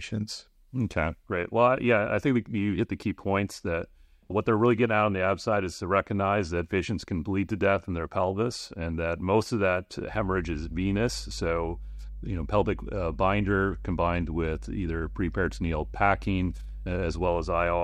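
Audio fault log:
10.09–17.84 s, mains hum: right after "that most of that", a steady 50 Hz tone enters beneath the speech and persists to the end of the clip, sitting roughly 10 dB below the speech. Power-line current is leaking into the signal path, most plausibly through a ground loop or a nearby transformer, so the buzz carries the supply frequency as a fixed low drone with some weaker low harmonics.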